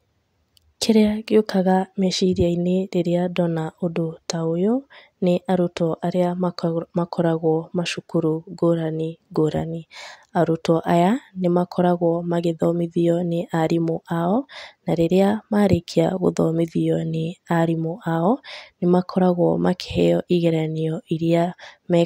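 A recording of speech, and nothing technically wrong can be heard in it. No fault turns up anywhere in the audio.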